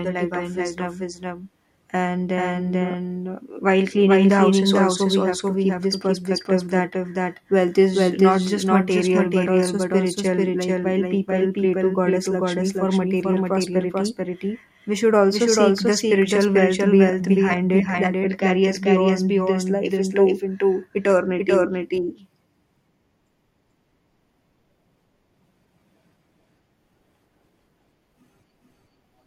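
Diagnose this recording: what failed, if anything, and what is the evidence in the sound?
Doubled audio track throughout: an equally loud full-band copy trails the speech by roughly 0.4 s, likely a second, slower capture path mixed in, with no room-echo decay or colouring.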